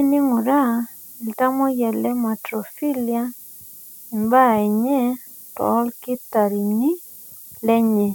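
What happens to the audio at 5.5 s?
At 5.5 s, as throughout, the speech carries low bit depth with noise shaping: 7-bit rounding error pushed upward becomes a thin hiss roughly 20 dB down, a bright band thickening toward the top of the spectrogram.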